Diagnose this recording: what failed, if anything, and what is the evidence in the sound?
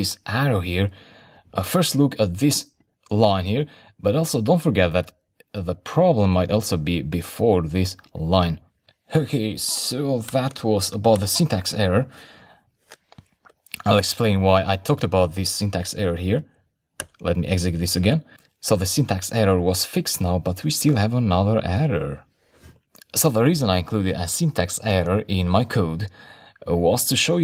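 Nothing failed here as far as I can hear, since no stage anywhere along the chain leaves a mark on this recording.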